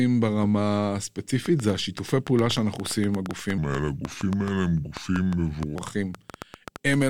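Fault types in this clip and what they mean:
Train of clicks: repeated short pulses ticking over the speech from 1.46 s to the end, about seven per second at an uneven pace, peaking roughly 10 dB above the signal and audible in pauses, likely from interference from nearby equipment or a faulty connection or power supply.
Section at the wrong speed: from 3.58 s to 5.76 s the speech plays at 0.788 times its proper speed, dropping pitch by about four semitones so it sounds deeper and slower, with speed and pitch changing together at the boundaries, likely from playback against the wrong clock.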